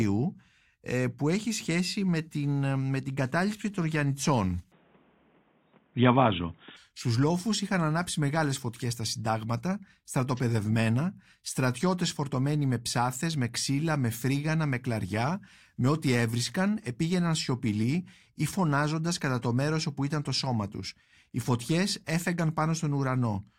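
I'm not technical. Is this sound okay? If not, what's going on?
No. From about 4.72 to 6.77 seconds, the recording likely switched its input to a poorer device, such as a different microphone or a headset's lower-quality call mode, and then switched back. For those two seconds the speech sounds dull and boxy, because everything above about 3.8 kHz is gone. The loudness also shifts, and a faint new background noise appears. There's no gap at either switch, so the change in tone is abrupt.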